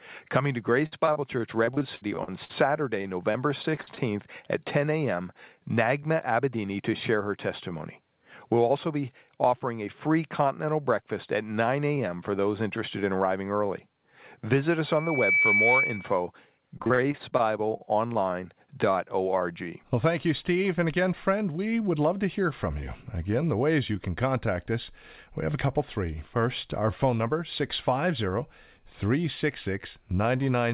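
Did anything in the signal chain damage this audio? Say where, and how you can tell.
Yes. Network stage: repeated packet loss (robotic sound) from 0.86 to 3.99 s and 16.77 to 18.17 s. Choppy patches fill holes up to 60 ms.

Jitter buffer speed-up at 6.12–6.63 s, 9.29–9.83 s and 20.49–21.81 s. Pitch stays put while tempo rises 5 to 8 percent. Short pitch periods are being dropped.

Acoustic loop: loudspeaker feedback squeal at 14.86–16.20 s. A steady 2.3 kHz tone swells over about half a second and ends up a few dB above the speech.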